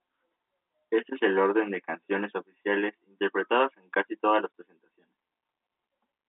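At 4.52 s the speech drops out for 20 ms, a single packet lost and replaced with silence. The gap is one packet long, and its edges are hard where the sound cuts off and restarts. The telephone band around 250 Hz to 3.6 kHz is what G.711 telephone coding gives you.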